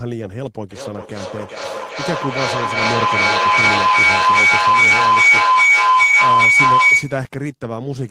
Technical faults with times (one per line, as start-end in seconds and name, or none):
0.71-7.36 feedback howl